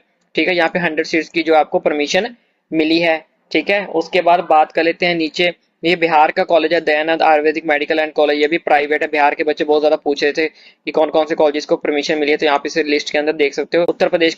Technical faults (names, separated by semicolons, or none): call bitrate drop